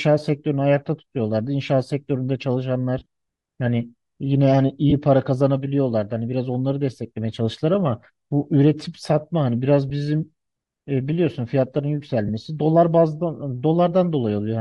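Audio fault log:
throughout: Bluetooth LC3 compression. The speech has a plainly audible breathy, grainy edge in its upper range, likely from a transform codec that discards much of the high spectrum and fills it with noise, which fits LC3 with 7.5 ms frames at around 48 kbps.
2.98–3.06 s, 4.90–4.93 s, 9.90 s, 12.28–12.30 s: lost LE Audio frames. The link dropped packets, so the decoder filled each gap by repeating the last spectrum with scrambled phase. The first gap is patchy, spread over about 90 ms, with its longest stretch around 20 ms.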